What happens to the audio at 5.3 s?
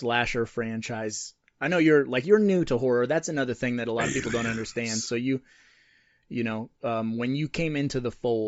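Bluetooth LC3 compression runs through the whole clip, so 5.3 s carries the same damage as every other moment. The speech has a breathy, grainy edge, and its upper spectrum sounds thin and hissy rather than clear. That points to a low-bitrate transform codec, likely LC3, working in 10 ms frames at a rate that fits about 32 kbps. At that rate much of the high band is discarded and filled with noise, and the damage is plainly audible.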